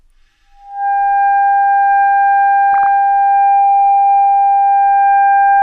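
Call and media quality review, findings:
DAB burbling, 2.74–2.86 s. Short noise blips in single sub-bands over the sound. Residual bit errors (around 0.2%) past DAB error correction corrupting MP2 samples; span fits a handful of consecutive frames.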